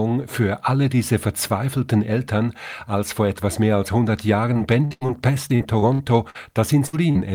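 From 4.53 to 5.10 s, and again from 5.48 to 6.37 s, the speech turns choppy and robotic from repeated packet loss: four and then six dropouts, each patched by stretching the preceding sound, concealing roughly a third and a fifth of each stretch. A spectrogram shows smeared, flattened harmonics repeating in short blocks, with the longest gaps 80 and 59 ms.

At 6.87 to 6.95 s a burst of packet loss removes about 60 ms. The last sound is held and faded over roughly 63 ms before the speech jumps ahead. The waveform shows a decaying, overly regular stretch.

At 7.11 to 7.17 s, short concealed packet loss fills about 40 ms with continued sound, giving a quick smear. A spectrogram shows a blurred sliver that blends back into normal detail.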